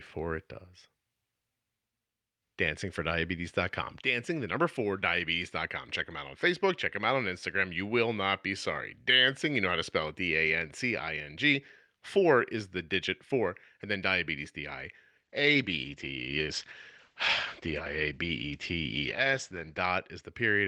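At 15.27 s the speech turns rough and muffled, which points to a call bitrate drop. The encoder seems starved, falling from roughly 48 to 11 kbps. Bandwidth narrows from 20 kHz to 8 kHz. The coarse, dull sound lasts until 20.29 s.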